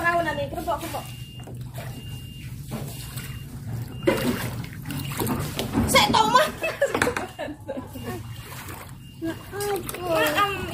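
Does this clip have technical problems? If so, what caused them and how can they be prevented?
No, there are no technical problems to hear in this clip. With nothing going wrong, there is no cause to trace and nothing that needs preventing.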